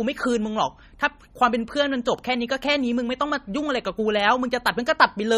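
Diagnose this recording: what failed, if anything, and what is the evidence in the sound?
Throughout the speech the sound is watery and swirly, with chirpy, metallic s sounds, smeared consonant attacks and nothing above 15.2 kHz. The likely cause is heavy MP3 compression at the codec stage: starved of bits, which fits roughly 32 kbps, the encoder cuts the treble and drops weak frequency lines frame to frame.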